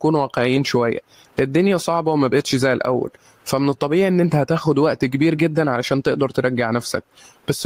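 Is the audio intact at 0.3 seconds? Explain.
No. At 0.3 seconds the speech is affected by gain pumping, which runs through the whole clip. The level swings by something like 15 dB. This likely comes from input gain set far too high, with a fast limiter or compressor clamping down on every peak. Loud and quiet passages end up squashed close together.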